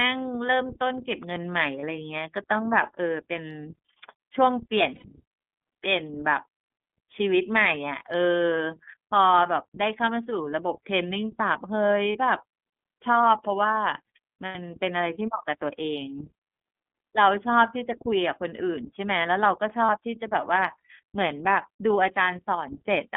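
From start to end the speech passes through the iLBC codec. The band runs from about 200 Hz to 3.5 kHz, so the sound is thin and muffled. Each frame's excitation is coded on its own, and the frame length fits the 30 ms mode at 13.33 kbps. The codec damage is plainly audible. Voiced sounds turn rough and slightly synthetic.

Lost iLBC frames then break the speech five times. The first gap runs from 1.80 to 1.83 s. A longer gap follows from 4.95 to 5.05 s. Short gaps fall at 12.12 to 12.16 s and 19.86 to 19.90 s, with another long one at 14.46 to 14.56 s. The short gaps last about 30 ms, which points to one lost frame. The long ones last about 90 ms, which fits three. In each gap the decoder repeats the last pitch cycle mixed with noise. This is heard as a brief held, buzzy vowel. In the 90 ms gaps it fades as the loss goes on. The voice is right again almost at once after each gap.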